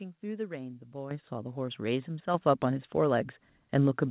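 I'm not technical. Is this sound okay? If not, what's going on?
No. The speech and the background get suddenly louder together at 1.11, 2.34 and 3.36 seconds, with the biggest jump first and smaller ones after. This is the microphone volume stepped up: the call software judged the microphone too quiet and raised its input level in steps.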